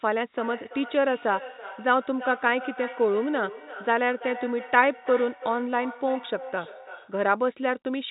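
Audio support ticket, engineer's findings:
Feedback echo between two devices, 0.33–7.27 s: speech repeats roughly every 0.3 s, about 14 dB down. A nearby device's playback is re-captured, beyond the local canceller's reach.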